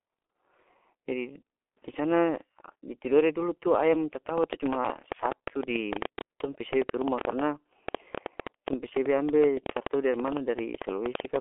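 From the start the speech is muffled and hoarse, with consonants smeared together and nothing audible above about 3.8 kHz. That is the G.723.1 codec at work. Its coder analyses the signal in coarse 30 ms frames and rebuilds it from a slowly updated voice model, squeezed into a telephone band of roughly 300 Hz to 3.4 kHz. The damage is heavy and fits a bitrate of about 6 kbit/s.

From 4.38 s to 11.37 s a train of clicks ticks over the audio at an uneven pace, averaging about 8.7 per second, for some seventy clicks. They continue through the pauses and peak around 15 dB above the speech, so they sit clearly on top of it. Their similar shape and persistence point to a likely outside source, such as electrical interference or a faulty connection injecting pulses.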